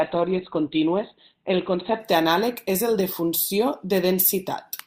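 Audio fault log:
0.0–2.0 s: adaptive stream starting at a low bitrate. The speech opens thin and smeared, with nothing above about 4.3 kHz and stronger codec artefacts, which fits a stream near 12 kbit/s. The player began on a cheap version to start fast. Once it had measured the connection, it switched to a better one, which fits about 64 kbit/s. At 2.0 s, just before "anàleg és el de", the treble returns abruptly with no gap.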